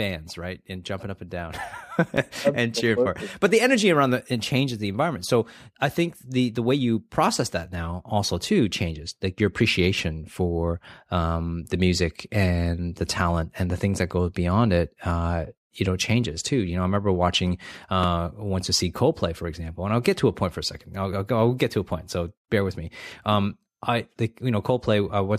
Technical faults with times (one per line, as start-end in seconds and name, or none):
2.17 repeated buffer
18.03 repeated buffer